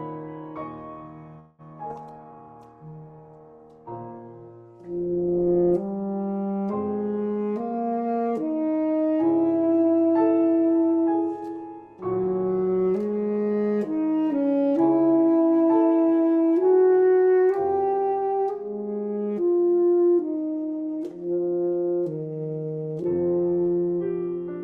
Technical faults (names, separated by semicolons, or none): call audio freeze; skip ahead; call bitrate drop; jitter buffer slow-down; jitter buffer speed-up